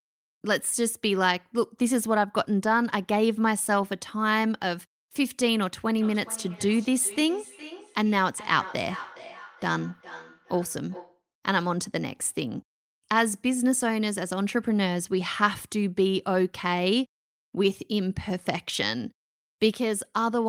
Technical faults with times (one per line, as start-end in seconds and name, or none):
5.95-11.22 feedback echo between two devices